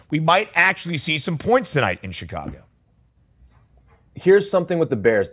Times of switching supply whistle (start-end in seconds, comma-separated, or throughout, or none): none